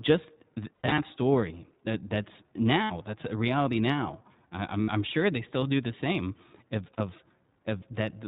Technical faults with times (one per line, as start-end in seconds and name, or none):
0.00-8.27 iLBC codec
0.74-0.99 lost iLBC frames
2.83-2.92 lost iLBC frames
4.82-4.89 lost iLBC frames
6.94-7.01 lost iLBC frames